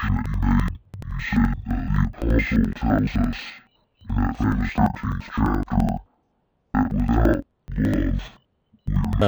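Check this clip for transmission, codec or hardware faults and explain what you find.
The speech is carrying one fault from start to finish: interleaved audio read as planar. Each block of alternating left and right samples is split down the middle, the first half taken as left and the second as right, so both channels play at half speed over the same span. With blocks about 85 ms long, which fits a 4096-sample buffer, the result is speech an octave low, doubled and choppy, stuttering at 11.7 Hz. Unlike a sample-rate mismatch, the pace stays correct even though the pitch drops.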